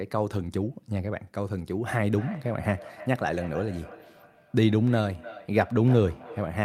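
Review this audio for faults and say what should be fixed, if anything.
Feedback echo between two devices runs from 2.06 s to the end. The speech returns roughly every third of a second, at most about 18 dB below the direct sound. A second device in the room replays this microphone's signal, which is picked up again, and neither echo canceller removes the other device's output. To prevent it, keep only one device on the call in each room, or mute the extra device's microphone and speaker.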